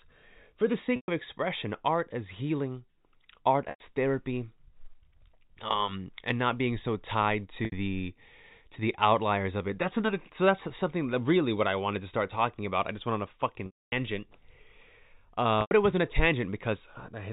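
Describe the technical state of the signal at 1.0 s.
Packet loss with pitch repetition: 120 ms of audio went missing from 0.96 to 1.08 s, and the receiver looped the last pitch period, which fades to near silence before the speech returns.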